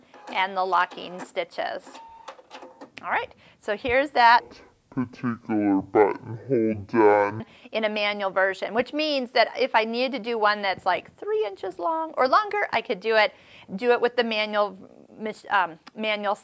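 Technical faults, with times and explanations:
4.40–7.40 s, wrong sample rate: the sound drops a full octave and drags at half speed, which fits 32 kHz material being played back at 16 kHz without conversion.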